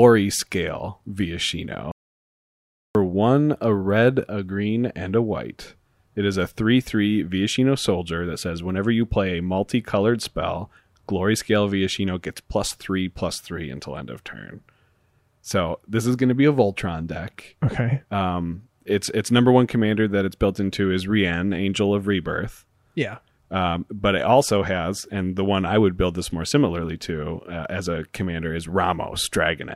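At 1.92 s the speech cuts off abruptly and the track goes to silence until 2.95 s, an audio dropout to silence lasting about 1.03 s. No room tone or noise floor remains in the gap, which points to the input signal being lost, likely through a disconnected device, failed link or mute, while recording continued writing silence. The speech resumes mid-flow on "one a red a", and whatever was said during the gap is missing.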